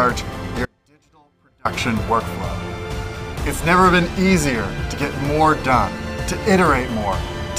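At 0.65 s the audio drops out abruptly to a faint residue and stays there until 1.65 s, a gap of about one second. Within it only a faint leak of the sound remains, roughly 35 dB below its normal level, before it cuts back in. This audio dropout is likely a loss of the wanted signal at some point upstream while the rest of the path stayed live, which is why the gap isn't silent.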